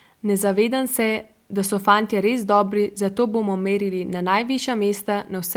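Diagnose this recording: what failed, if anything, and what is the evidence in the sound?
Nothing failed: no stage from capture to playback leaves an audible mark on the speech, so there is no fault evidence to report.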